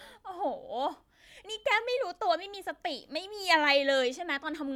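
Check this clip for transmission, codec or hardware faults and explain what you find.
No transmission, codec or hardware fault can be heard in this speech recording, and the signal stays steady and intact throughout.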